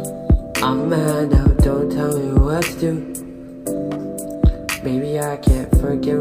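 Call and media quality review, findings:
No faults found in this clip.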